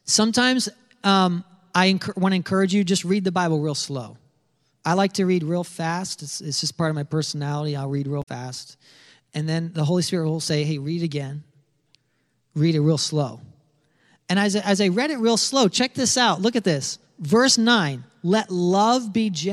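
At 8.19 s, right after "my personality I'll read", the speech breaks into a short glitch lasting until 8.29 s. This is damaged data in a compressed stream. Some of the coded bytes were corrupted, so the decoder misread those frames and lost sync. It then hunted for the next valid frame header. A second, briefer blip follows at 17.46 s, just after "at this". Both sound like a quick chirp, squawk, click or short hole.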